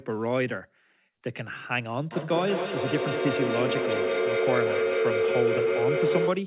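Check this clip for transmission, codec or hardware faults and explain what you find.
There is one fault, a feedback howl. From 2.12 s to the end, a microphone-to-loudspeaker loop between two devices in the same room gains level on each pass. The repeats, about 200 ms apart, grow into a tone near 500 Hz that peaks about 2 dB above the speech. The call path's narrowband sound, with nothing above 4 kHz as fits a G.711 codec, is audible throughout but is not a fault.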